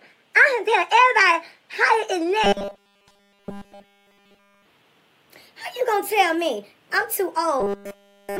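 From 2.44 to 4.66 s, the sound collapses into a rigid metallic buzz at 200 Hz. This is robotic sound from repeated short buffers. Nearly all the real audio in that span is skipped. A 5 ms slice is likely replayed over and over because new audio arrives too seldom. That repeat rate sets the buzz at 200 Hz. The same buzz returns from 7.60 to 8.40 s, running to the end.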